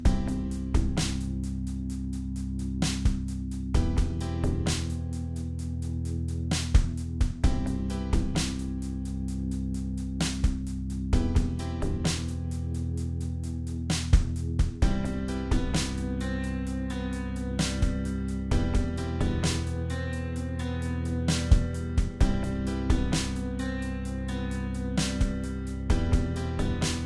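No technical faults can be heard anywhere in the audio.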